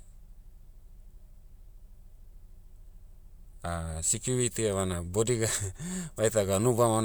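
No technical faults are audible.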